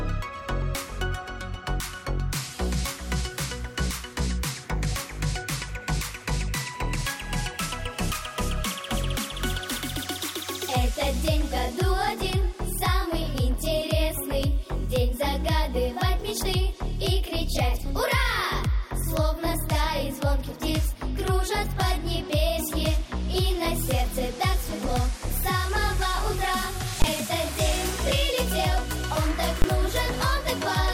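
At 27.02 to 27.04 s and again at 29.62 to 29.64 s, invalid numbers at full scale occur. A calculation returned infinite or invalid values that were forced to the maximum sample value, pinning the output for each 20 ms block, heard as a single loud bang.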